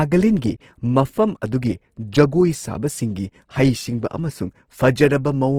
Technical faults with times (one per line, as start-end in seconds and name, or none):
0.00-5.59 Opus compression